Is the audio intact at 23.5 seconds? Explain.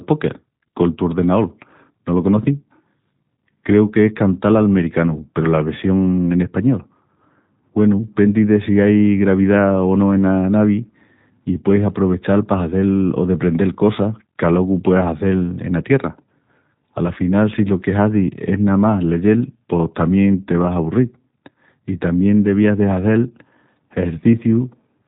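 No. At 23.5 s, as throughout, the speech carries G.729 codec damage, consistent with an 8 kbit/s coder rebuilding it from a filter, pitch predictor and sparse pulses. It sounds rough and synthetic, and a spectrogram shows nothing above 4 kHz.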